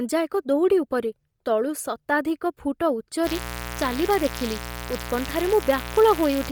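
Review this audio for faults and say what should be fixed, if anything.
Heavy coding damage runs through the whole speech clip: the upper spectrum sounds hollowed out and refilled with hiss, giving every syllable a breathy, grainy edge. That points to a likely cause in Bluetooth LC3 compression at a low rate, consistent with about 32 kbps and 10 ms frames. Unlike MP3-style artefacts, there is no swirly, warbling smear; the top end is replaced by noise, not garbled. To prevent it, raise the LE Audio bitrate or record over a wired path.

A mains buzz enters at 3.22 s and lasts to the end, fairly loud at roughly 10 dB below the speech. Its 60 Hz fundamental carries sharp harmonics reaching several kilohertz. Switching spikes from a dimmer, rectifier or unshielded cable arrive twice per mains cycle and produce this raspy, edgy tone. A plain ground-loop hum would sound smooth and low by comparison. 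To prevent it, use shielded, balanced cabling and keep dimmers and cheap power supplies off the audio circuit.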